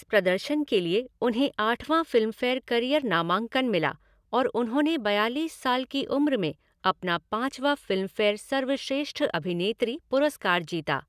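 No technical faults can be heard anywhere in the recording.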